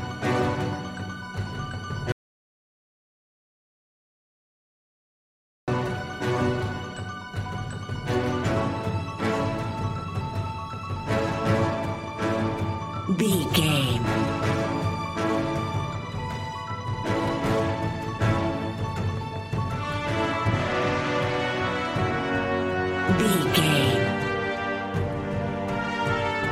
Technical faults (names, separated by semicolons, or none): audio dropout to silence